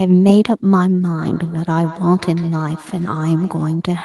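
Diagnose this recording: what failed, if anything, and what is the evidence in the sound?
Feedback echo between two devices, a call-processing fault: from 1.17 to 3.88 s the speech returns at a regular interval of roughly 150 ms, peaking about 19 dB below the direct speech. A second device in the room replays this microphone's signal, and the echo canceller never sees that playback to remove it.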